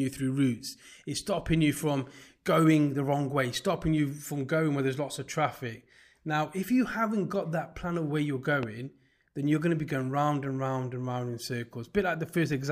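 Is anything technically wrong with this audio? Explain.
Yes. At 8.63 s, just after "plan of where you're", there is a loud pop lasting about 28 ms. It is a single sharp pulse, roughly 10 dB above the speech, which continues underneath. It is likely a voltage spike from a plug, switch or static discharge.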